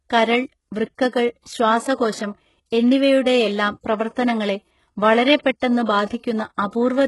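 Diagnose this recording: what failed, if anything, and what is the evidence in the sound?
The failure is at the codec stage, most likely HE-AAC compression run very hard. Throughout the speech the treble sounds bright but not genuine: the s sounds come out gritty and lispy, with a metallic sheen. Nothing survives above about 11.5 kHz. That's spectral band replication at work, with the top end copied up from lower bands and shaped by a coarse envelope, so the harmonics don't line up. The heavy damage points to a bitrate around 12 kbps.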